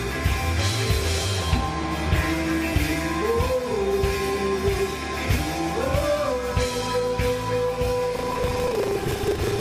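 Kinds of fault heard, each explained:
Buffer tearing: the software filling the playback ring buffer and the hardware draining it have drifted out of step, so their positions cross partway through every period. About a fifth of each buffer then plays material left over from the previous lap, roughly 150 ms stale, spliced in with abrupt joins on both sides. From 8.12 s to the end this comes through as a steady robotic buzz at 25 Hz, which fits a buffer period of about 40 ms.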